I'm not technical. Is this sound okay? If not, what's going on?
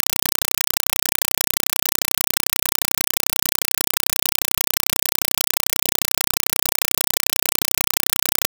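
No, it isn't. From start to finish you're hearing a compressed stream played as audio. The sound was sent as packed Dolby Digital data, and whatever played it treated that data as ordinary sound instead of unpacking it first. Each chunk of data comes out as a short burst of noise, about 4 milliseconds long, followed by silence, about 31 times a second. That's why you get loud, chattering static in place of the real sound.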